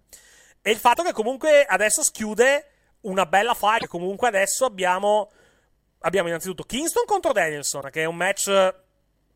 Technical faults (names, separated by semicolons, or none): damaged data in a compressed stream